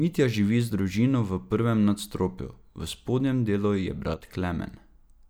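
Speech, with a sudden level dip near the end: from 4.14 to 4.27 s the sound falls by about 6 dB, then snaps back to full level. This is most likely one channel dropping out, where one side of a stereo signal goes silent for those 130 ms and the mono sum loses half of its common content. What separates it from an ordinary gain glitch or fade is the exact half-level step with hard edges at both ends, rather than a gradual or arbitrary change in loudness.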